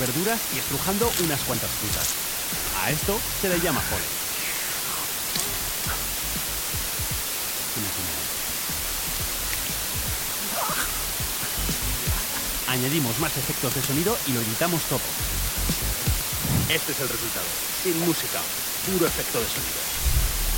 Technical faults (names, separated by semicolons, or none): low bit depth with dither